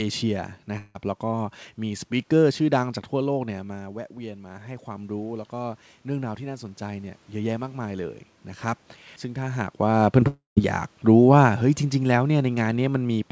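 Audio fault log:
0.78 to 0.96 s: long network dropout. About 0.16 s of speech is lost, likely to a network gap; the receiver extends the last sound, then speech resumes further on.
3.44 to 8.21 s: automatic gain rising. The talker moves away and the input drops about 12 dB. The gain climbs about 8 dB, so voice and room noise swell together.
9.83 to 12.53 s: automatic gain falling. The talker comes closer and the sound starts loud. The gain eases down about 3 dB, and voice and background sink together.
10.2 s: short concealed packet loss. About 20 ms never arrives in time. The decoder continues the last sound briefly, giving a small smear or wobble.
10.28 to 10.59 s: long network dropout. About 0.3 s is missing, likely from a network gap. A fading continuation gives way to about 0.14 s of silence before speech returns.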